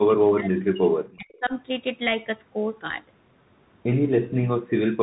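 Throughout, the speech carries the Bluetooth CVSD headset codec at 64 kbps: nothing passes above 3.8 kHz, s sounds turn scratchy and a granular hiss sits underneath. Unlike a simple narrowband filter, loud bright passages overload the one-bit up/down steps and distort.

From 0.06 to 1.53 s the speech sinks by about 40 dB for roughly a second and a half, most likely speech suppressed in double talk, with the echo canceller ducking the talker while the far side spoke.

Within that stretch, at 1.35 to 1.39 s, a faint scrap returns some 282 ms late and very low, around 35 dB under the speech. This is likely an echo leak, where loudspeaker sound escaped the echo canceller. It differs from room reverberation because it arrives as a separate delayed copy rather than a smooth decay.

At 4.47 to 4.52 s a brief 50 ms dip of about 20 dB recurs, again likely double-talk suppression.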